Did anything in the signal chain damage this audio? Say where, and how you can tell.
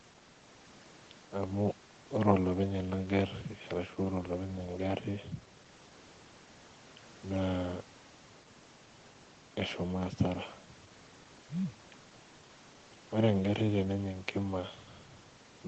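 No, nothing in the signal chain damaged this audio; it went through ordinary call microphone processing, which trims the lowest bass and leaves nothing above 8 kHz, as that stage normally does.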